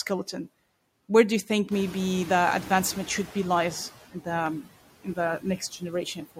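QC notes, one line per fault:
Throughout: noise suppressor artifacts. The suppressor pulls steady-noise bands down by about 17 dB frame by frame, so the background dips between phrases and swells under the speech.
1.71–3.89 s: noise suppressor catching up. The room noise jumps by about 14 dB at around 1.5 s and the suppressor's noise estimate trails behind it, taking about 2.18 s to adapt. The louder background at first comes through with only about 9 dB of reduction, then settles down as the estimate catches up.
2.85 s and 4.46 s: dropped samples. A tiny gap, likely just a handful of samples or about a tenth of a millisecond, makes the waveform jump straight to a later value. Nothing audible is lost, but each jump is heard as a single sharp click, a thin vertical line in the spectrum.
5.40–5.82 s and 6.05 s to the end: speech cut by the noise suppressor. The suppressor mistook brief parts of the speech for noise and turned them down by as much as about 14 dB, roughly a tenth of a second in total in each stretch, so those soft sounds come across swallowed or faint.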